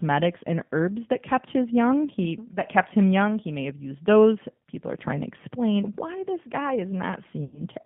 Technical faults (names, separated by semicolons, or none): G.729 codec; chunks out of order; VoIP packet loss concealed by the speech codec